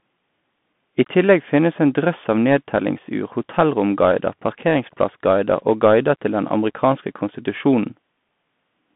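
From start to finish the speech carries Bluetooth CVSD headset codec damage. The band runs only from about 150 Hz to 3.5 kHz, which fits a 64 kbps CVSD link. Its one-bit adaptive steps can't follow fast loud peaks, leaving scratchy s sounds, distorted peaks and granular hiss underneath.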